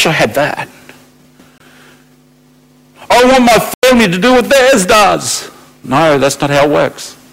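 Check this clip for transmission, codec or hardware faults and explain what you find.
Two faults are present: hard clipping through the whole speech clip, and two blocks of digital silence.

Hard clipping runs throughout. The signal is overdriven by about 21 dB, so roughly 15 percent of samples have their peaks cut flat. Loud passages sound fuzzy and harsh.

Blocks of digital silence occur twice. The first spans 1.58 to 1.60 s, a 23 ms hole that fits a 1024-sample buffer. The second spans 3.74 to 3.83 s, after "I want my" and before "to do what theirs". It lasts 93 ms, fitting a 4096-sample buffer. Zeros replace the audio, so the sound drops out and returns abruptly.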